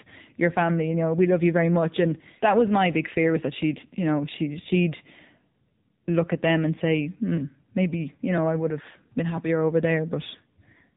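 From start to end the speech carries AMR narrowband mobile codec damage, plainly audible: nothing above 3.8 kHz survives, giving a flat-topped spectrogram, and the low-bitrate vocal-tract model, which fits roughly 7.95 kbps, sounds buzzy and synthetic.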